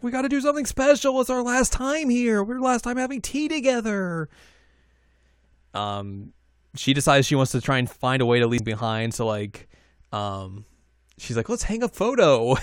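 Damaged data in a compressed stream at 8.58 s, just after "find a way to": corrupted frames throw the decoder out of sync, giving a brief glitch.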